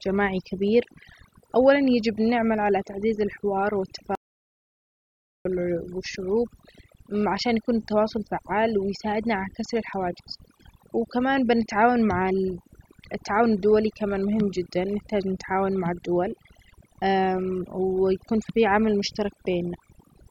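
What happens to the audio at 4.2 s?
At 4.15 s the speech cuts out in an audio dropout to silence lasting about 1.3 s, until 5.45 s. The gap is silent with no room tone, most likely because the input signal was lost while the recorder kept writing samples, so whatever was said in that span is gone. Around it, overdone noise removal is active throughout the clip: the bands near the noise estimate are pulled down so hard that the background drops and breaks up into twinkling specks, and the quieter parts of the voice go with them.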